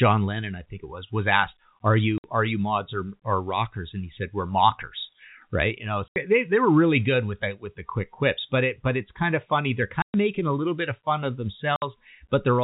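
Packet loss filled with silence cuts this speech at 2.18, 6.08, 10.02 and 11.76 s, with hard-edged gaps of 60, 80, 120 and 60 ms. These are multiples of 20 ms, which fits lost 20 ms packets replaced by digital silence.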